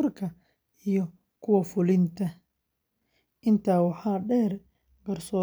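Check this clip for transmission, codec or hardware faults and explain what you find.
No transmission, codec or hardware faults are audible here.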